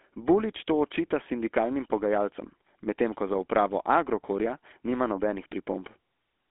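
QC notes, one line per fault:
Throughout: GSM full-rate codec. The speech has a buzzy, gravelly roughness because the codec rebuilds it from a vocal-tract filter driven by a coarse pulse excitation, which fits the 13 kbps GSM full-rate scheme. Nothing survives above about 3.8 kHz and the line band sits near 250 Hz to 3.5 kHz, so it sounds thin and muffled. On a spectrogram there is a hard ceiling near 3.8 kHz, weak lows below 250 Hz and smeared, grainy harmonics.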